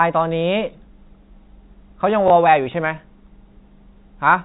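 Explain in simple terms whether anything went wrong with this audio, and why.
Around 2.28 to 2.30 s the speech gives a small blip. That is packet loss with last packet repeated: one 20 ms chunk of audio went missing, so the receiver replayed the previous chunk.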